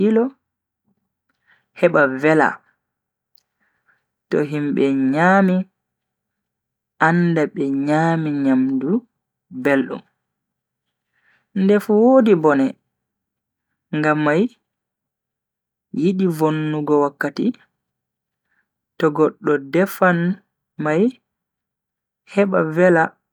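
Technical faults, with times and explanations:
The speech signal stays continuous throughout, with no technical faults to report.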